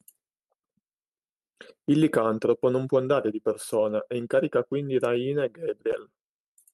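No technical faults can be heard in the speech, which has come through a WebRTC call path whose top end stops around 12 kHz, consistent with Opus coding at about 32 kbps.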